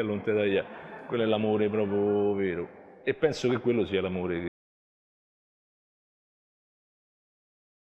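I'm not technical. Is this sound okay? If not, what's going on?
No. At 4.48 seconds the sound cuts out mid-flow and never returns. This is an audio dropout to silence. The gap is total silence, with no background hiss at all. Anything after that point is lost. Most likely, the input was disconnected or muted while recording continued.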